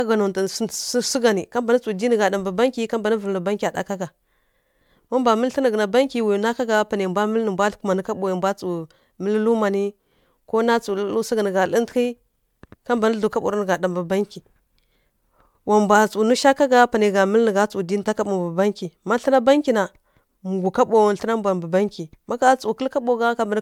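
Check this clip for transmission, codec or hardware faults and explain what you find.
The clip shows one fault, running through the whole recording: generation loss. The speech has most likely been passed through a lossy codec again and again, decoded and re-encoded about four times, with a character that points to MP3 at around 128 kbit/s. Because each pass lands on a shifted frame grid, it quantises the audio anew, and the errors stack. The speech therefore sounds swirly, smeared and hollow beyond what that bitrate alone would produce, and consonant onsets lose their crispness, while nothing lies above about 20 kHz.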